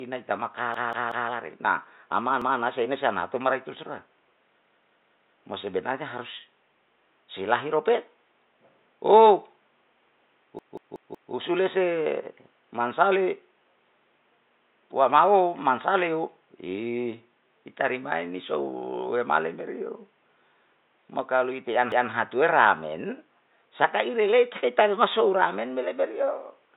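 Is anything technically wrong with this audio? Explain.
Yes. The speech has a repeated buffer fault at 0.74–1.30 s, 2.42–2.60 s (just before "sei na si"), 4.64–5.39 s (before "mo sebenarnya"), 10.59–11.33 s, and 21.92–22.11 s (between "mo kalo ite han" and "atue ra men sakai"). Fresh audio missed its deadline, so playback looped the last 186 ms block, which fits an 8192-sample buffer, one to four extra times. Each event sounds as a stutter with hard joins at every repeat.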